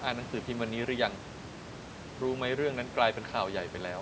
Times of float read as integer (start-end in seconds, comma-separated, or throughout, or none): none